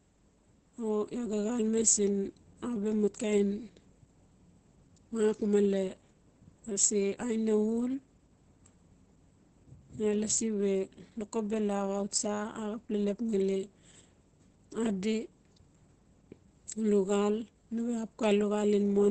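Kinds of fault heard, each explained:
Opus compression: The speech runs muffled and hoarse the whole way through, with heavy damage, and the likely cause is Opus working in its low-rate speech mode, SILK. That mode models the voice instead of keeping every band's energy, so it loses fine detail and sounds rough. Nothing seems to survive above about 8 kHz, which points to wideband operation, and the thinness fits a stream somewhere around 12 kbps.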